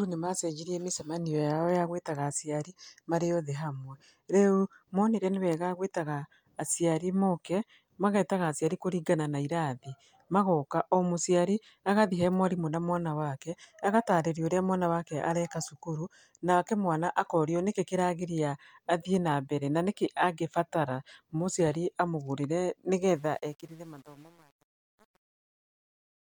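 A speech recording whose closing fade-out turns gritty from 23.14 s and is at its worst from 23.3 s to the end, which is truncation distortion on a fade, likely from an undithered stage that fits about 8 bits.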